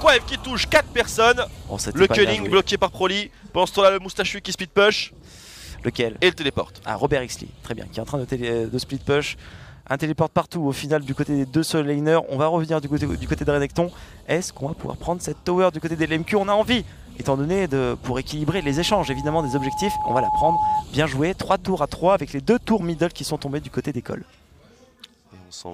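A loudspeaker feedback squeal starts at 18.46 s and lasts until 20.86 s: a single 852 Hz tone swells over about two seconds to a few dB above the audio. Unlike a steady interfering tone, it grows on its own as the microphone-to-speaker loop gain exceeds one.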